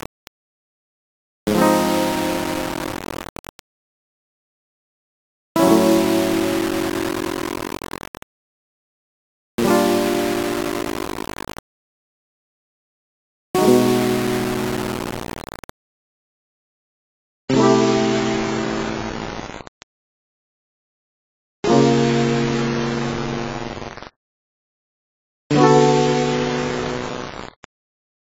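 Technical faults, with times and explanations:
Throughout, low bit depth without dither: the music sounds grainy and gritty, with distortion tracking the signal about 10 dB down, likely from rounding to roughly 4 bits.
16.59 to 28.23 s, adaptive stream at a lower bitrate: treble abruptly vanishes above 7.6 kHz and artefacts rise without a gap, which fits a switch from 96 to 16 kbit/s AAC.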